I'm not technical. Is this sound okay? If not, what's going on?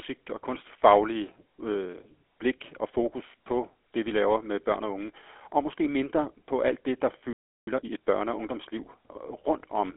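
No. The speech went through the GSM full-rate codec, the old mobile-phone coder, which rebuilds the voice from a simple model and throws away everything above about 4 kHz. Throughout the clip this leaves the voice plainly buzzy, gravelly and muffled.

At 7.33 s, just after "på alt det der", there is a playback stall. The player likely ran short of data and went quiet. The speech stops dead in mid-flow for about a third of a second, until 7.67 s.

Then comes time-compressed catch-up. To win back the lost time, the player cuts out tiny pieces and blends what remains, running at double speed. From 7.67 to 8.01 s the speech sounds hurried, at its normal pitch.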